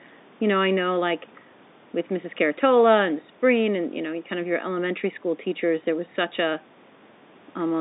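Nothing stood out as a fault on listening to this speech: the narrow telephone band and faint room noise in the background are simply part of how the call was carried and recorded.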